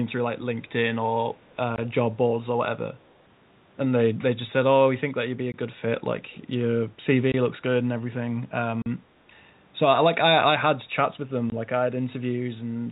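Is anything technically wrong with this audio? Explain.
Yes. There are two faults.

Packet loss filled with silence occurs at 1.76, 5.52, 7.32 and 11.5 s, each gap 20 ms, and at 8.82 s for 40 ms. Lost audio was replaced by silence. The gap lengths point to 20 ms packets. Each hole has hard edges.

An echo leak appears at 3.07 to 3.11 s and at 6.32 to 6.37 s. A faint, delayed copy of the speech returns 220 ms late, far quieter than the original. The likely cause is a far-end loudspeaker whose echo canceller let some pickup through.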